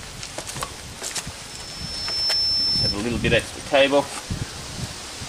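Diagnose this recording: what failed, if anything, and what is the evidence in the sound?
Loudspeaker feedback squeal in the acoustic loop from 1.48 to 3.02 s: a 5.3 kHz tone swells over under a second to about 5 dB above the sound, a bright horizontal spectrogram line.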